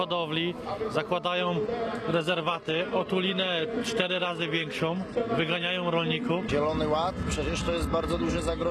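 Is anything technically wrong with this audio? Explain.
Yes, there's one problem. At about 1.40 s the quality drops suddenly, with no gap, and stays down to the end. That's an adaptive stream switching to a lower bitrate: the connection slowed, so the player swapped to a leaner version of the stream. From then on nothing survives above about 12.3 kHz, the top end turns thin and synthetic, and codec artefacts creep in. It sounds like a jump from roughly 96 kbit/s AAC to something near 16 kbit/s HE-AAC.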